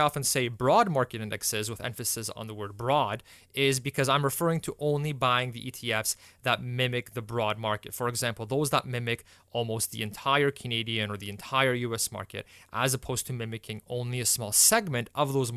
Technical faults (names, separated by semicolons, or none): none